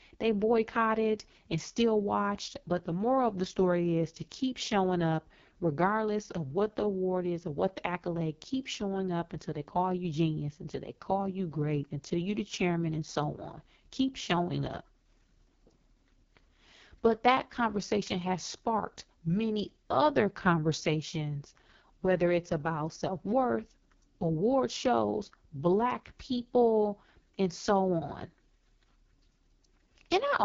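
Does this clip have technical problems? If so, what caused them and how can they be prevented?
Yes. Throughout, the speech has passed through the AMR wideband (HD Voice) codec at a very low rate, which fits its 6.6 kbit/s mode. The vocal tract model is starved of bits, so voices sound rough and raspy, and nothing remains above 7.2 kHz. Using 12.65 kbit/s or higher prevents this.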